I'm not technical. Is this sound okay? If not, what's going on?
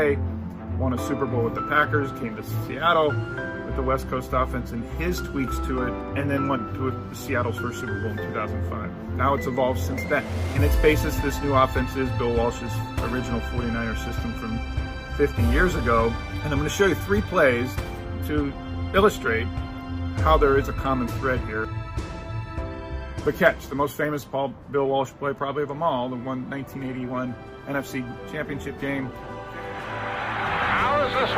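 Yes, the sound is okay, and nothing in it is going wrong. There is nothing here that needs fixing.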